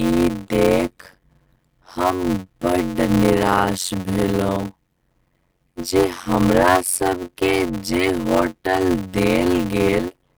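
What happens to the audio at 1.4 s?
At 1.4 s you're hearing the block size mismatch (padded) that runs through the whole speech clip. One stage writes shorter blocks than the next one reads, and the leftover space in each block gets filled with silence, which fits 256-sample writes. That little gap repeats at 91.9 Hz, so there's a steady buzz under everything, and the speech drags at 0.533 times normal speed while the timbre stays about where it should be.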